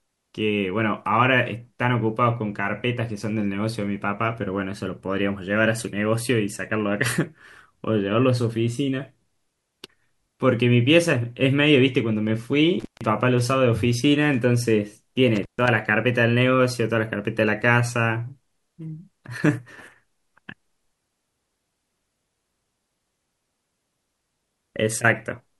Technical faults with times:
12.80-13.06 intermittent contact
15.35-15.68 intermittent contact

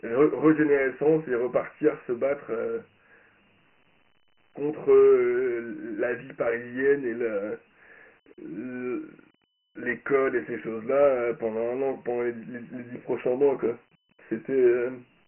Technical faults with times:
0.00-15.27 Dialogic VOX ADPCM

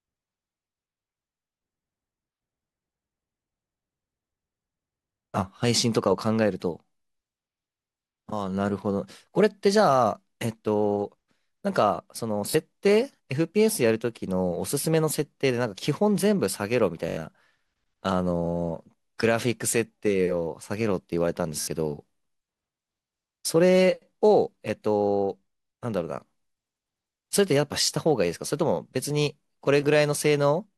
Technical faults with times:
12.50-12.54 repeated buffer
17.09-17.17 repeated buffer
21.61-21.67 repeated buffer

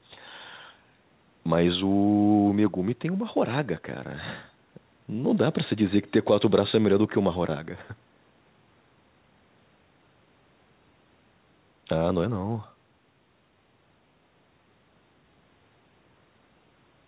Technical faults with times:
none

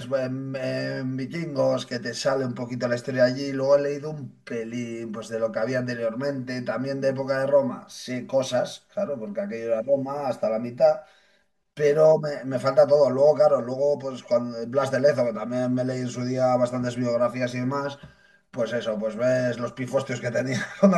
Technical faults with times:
0.00-20.97 channel delay (comb filtering)

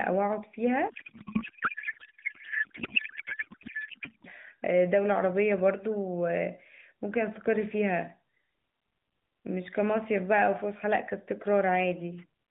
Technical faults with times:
0.90-4.28 codec payload misread

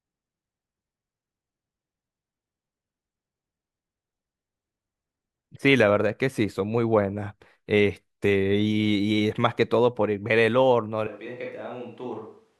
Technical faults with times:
11.07-12.59 switch to a distant microphone

